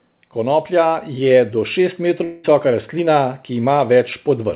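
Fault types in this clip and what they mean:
Automatic gain rising: the call's gain control judged the input too quiet and slowly turned it up by about 6 dB, so from 0.34 s to 3.79 s the speech and its background noise swell together, growing steadily louder across that stretch.
Long network dropout: a gap in arriving audio, likely a network dropout, left about 200 ms missing from 2.24 s to 2.46 s. The receiver filled nearly all of it by extending the last sound, so a smeared, fading buzz replaces the speech before the audio resumes.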